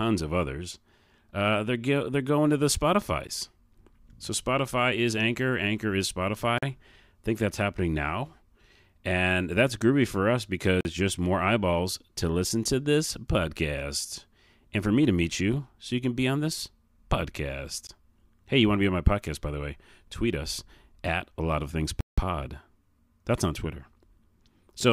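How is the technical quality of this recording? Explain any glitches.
The speech is interrupted five times by blocks of digital silence. There is a short tick at 3.27 s and a brief gap at 17.87 s (about 13 ms and 20 ms), brief dropouts from 6.58 to 6.63 s and from 10.81 to 10.85 s (about 43 ms each, the second between "that's groovy for us" and "just more eyeballs to"), and an audible 170 ms hole from 22.01 to 22.18 s, right after "a lot of things". Most likely the output buffer wasn't filled in time and was sent as zeros, so the sound drops straight to nothing and back with no fade. The 43 ms gaps fit a 2048-sample buffer, and the longest fits four of them.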